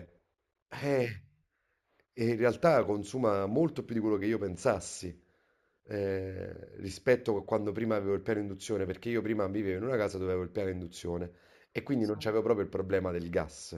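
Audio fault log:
throughout, imaging from linear upsampling: speech raised from 16 kHz to 48 kHz by straight-line interpolation leaves a mirror image at 8–16 kHz, about 30 dB down, dulling highs and adding metallic shimmer to sibilants.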